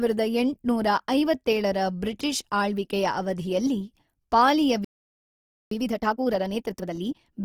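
Throughout, the speech sounds rough and grainy rather than swirly, with the full bandwidth kept. This points to Opus compression, likely in its CELT music mode at a rate around 24 kbps, and it is clearly unlike MP3's hollow, watery holes.

At 4.85 s, right after "ಆಳ್ವಿಕೆಯ ಅವಧಿಯಲ್ಲಿ ಪಾಲಿಯ", the sound stops dead for 0.87 s until 5.71 s. This is a playback stall, likely from the player running out of data.

From 5.71 s to 7.33 s comes time-compressed catch-up. The audio runs at 1.5 times normal speed while keeping its pitch, which distinguishes it from a sped-up tape.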